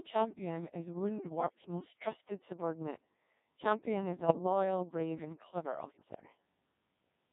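From the first moment the speech has the robotic, buzzy character of the Codec 2 vocoder, with heavy damage consistent with its 1.6 kbit/s mode. Only pitch, voicing, energy and a coarse spectral envelope survive, and the decoder rebuilds the voice from sine waves. On a spectrogram the harmonics look like evenly spaced synthetic stripes under a smeared envelope, with little detail between them. The waveform no longer matches natural speech in shape.

Bit errors on digital voice radio then cause three bursts, at 1.44 to 1.62 s, 4.20 to 4.39 s and 5.92 to 6.03 s. The first and last bursts each fit a couple of corrupted frames, and the middle one fits about four. Flipped bits scramble the pitch, level and voicing parameters, so the voice lurches in pitch and loudness and breaks into warbling bleeps. The last burst comes at the highest error rate, about seven percent. On a spectrogram the harmonic stripes jump abruptly or turn to noise, and the waveform shows sudden changes in amplitude.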